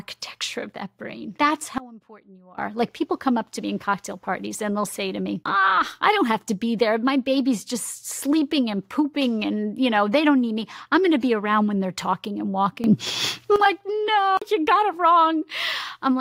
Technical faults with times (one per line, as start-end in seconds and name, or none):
1.78-2.58 sudden gain jump
12.84-13.56 sudden gain jump